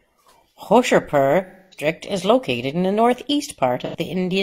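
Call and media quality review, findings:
AAC frame loss with concealment, 1.46 to 1.87 s. About 256 ms of audio missing. The decoder rebuilds from the last good spectrum, giving a smeared, phasey fill that decays, then fades back in. Probable component: AAC decoder.

AAC frame loss with concealment, 3.85 to 3.95 s. Shorter gap, about 85 ms. Brief noisy smear where the spectrum is repeated. Fits a pair of lost frames.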